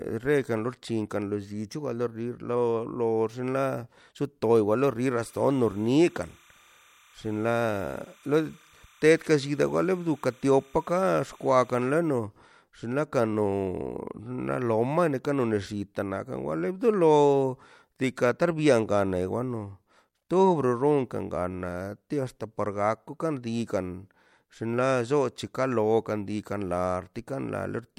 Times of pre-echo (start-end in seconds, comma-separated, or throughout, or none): 20.29